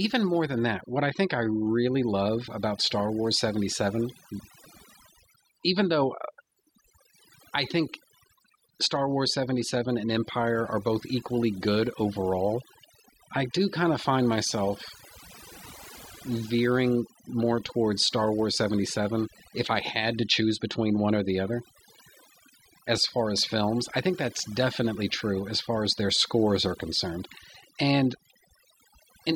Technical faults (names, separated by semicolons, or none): overdone noise removal